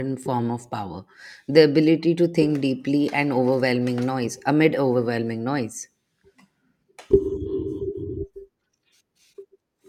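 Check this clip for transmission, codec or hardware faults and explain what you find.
No transmission, codec or hardware faults turn up anywhere in the speech. There is nothing to report on any of those three fronts.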